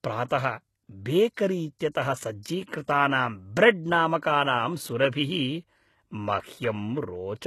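Throughout the speech, the treble sounds synthetic and gritty. Nothing is present above 12.3 kHz. This is likely HE-AAC compression at a low bitrate, near 16 kbps. The top band is rebuilt from copied lower bands, so its harmonics don't match and s sounds turn lispy.

Pre-echo occurs at 1.79 s, from 1.92 to 1.95 s, and from 2.85 to 2.88 s. Each attack is preceded by brief hiss spreading 18, 34 and 29 ms. The codec spread block-wide quantisation noise into the quiet moment before each onset, softening it.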